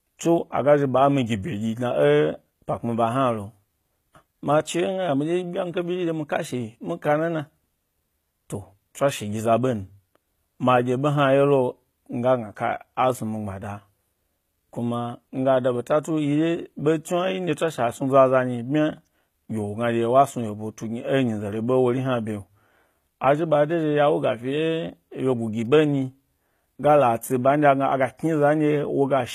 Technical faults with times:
0.00-29.34 HE-AAC compression

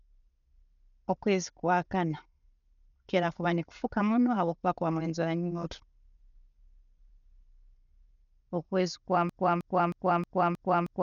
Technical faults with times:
0.00-11.03 Dolby Digital compression
9.29-11.03 broken-record loop

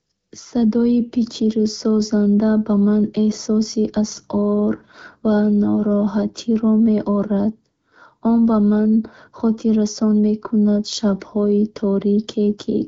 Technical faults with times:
none

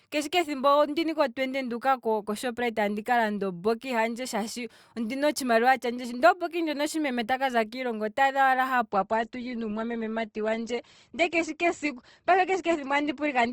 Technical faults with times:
8.92-13.52 adaptive stream at a lower bitrate

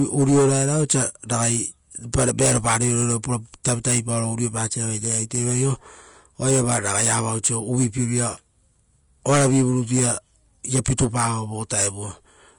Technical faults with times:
0.00-12.58 low-bitrate audio saved at a high bitrate

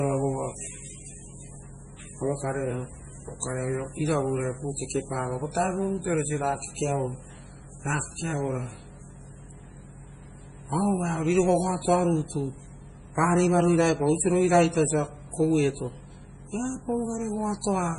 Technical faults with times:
0.00-17.98 MP3 compression

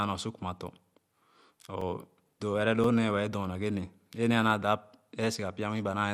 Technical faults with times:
0.00-6.13 MP2 compression
0.79-3.87 periodic USB or driver dropouts
4.27-4.44 DAB burbling

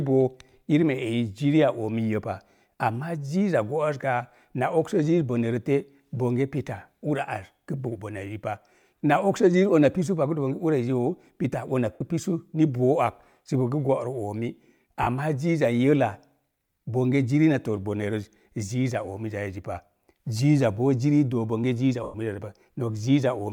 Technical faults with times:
11.92-12.01 lost LE Audio frames
15.02-15.07 lost LE Audio frames
22.03-22.14 lost LE Audio frames

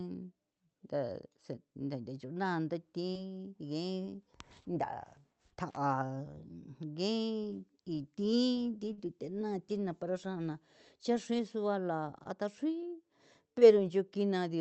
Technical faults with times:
3.11-3.15 short concealed packet loss
5.69-5.77 intermittent contact
8.93-8.99 short concealed packet loss
12.23-12.27 short concealed packet loss
13.59-13.63 short concealed packet loss

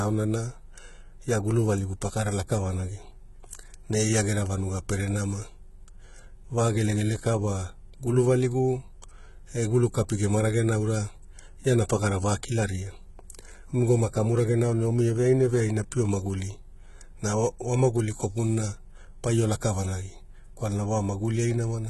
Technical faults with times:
0.00-21.90 HE-AAC compression

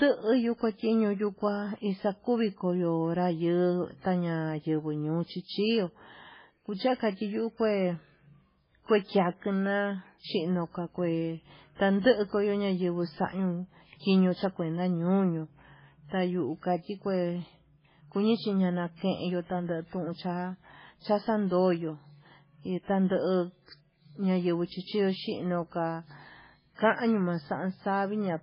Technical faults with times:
0.00-28.43 MP3 compression
11.75-11.79 pre-echo
24.66-24.70 pre-echo

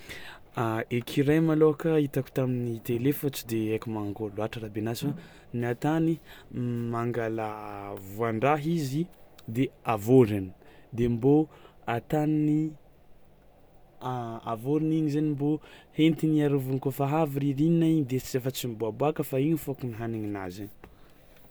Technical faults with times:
none

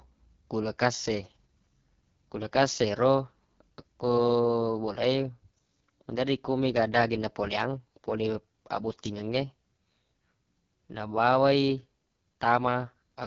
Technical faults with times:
0.00-13.26 AMR wideband (HD Voice) codec

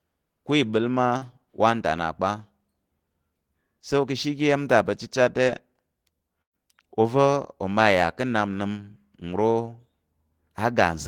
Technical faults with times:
1.17-1.23 short concealed packet loss
5.43-5.48 short concealed packet loss
6.42-6.55 burst of packet loss

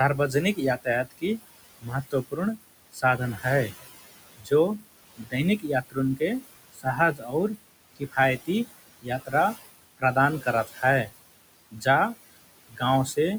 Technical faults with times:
0.00-13.39 noise suppressor artifacts
0.18-3.73 speech cut by the noise suppressor
4.38-9.33 speech cut by the noise suppressor
9.98-11.11 speech cut by the noise suppressor
11.71-11.86 speech cut by the noise suppressor
12.69-13.17 speech cut by the noise suppressor

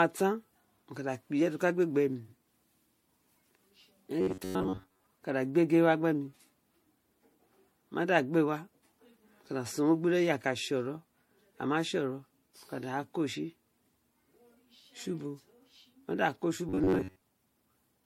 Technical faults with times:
0.00-18.06 generation loss
4.21-5.04 robotic sound from repeated short buffers
16.69-17.22 robotic sound from repeated short buffers

